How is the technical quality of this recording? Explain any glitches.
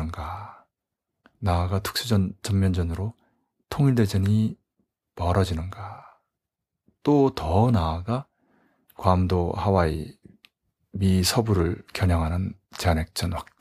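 No technical faults can be heard in this speech recording. There are no glitches to explain.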